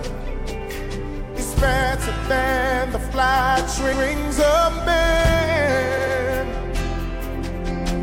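Repeated frames: stretches of compressed audio were sent or written again, so the decoder replays them. At 3.92 s a 139 ms block plays twice, and at 5.96 s a 93 ms block plays three times. Both are heard as stutters, and together they lengthen the audio by about 0.33 s.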